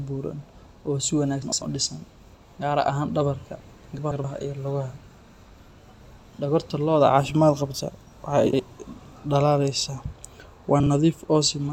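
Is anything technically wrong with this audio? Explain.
Yes. There are four instances of frames out of order in this speech: 1.43 to 1.62 s (between "buuran oo si" and "u dhisan"), 3.98 to 4.24 s (between "gaar ahaan dhabarka" and "iyo lugaha"), 8.46 to 8.60 s, and 10.80 to 10.87 s. In each, two adjacent blocks were decoded swapped. The blocks are 96, 128, 64 and 32 ms long, which fits 32 ms frames. The swapped halves give a garbled flutter. Unlike a dropout or stutter, nothing is lost or repeated, and the timing stays intact.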